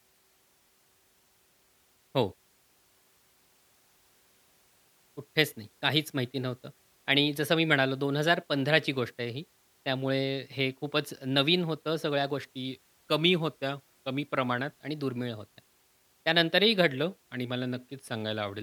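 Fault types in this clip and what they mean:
Drift correction step: speech twice slows 5.8% and drops 104 cents, likely a clock-matching rate jump; spectrogram harmonics step down, waveform stretches in time.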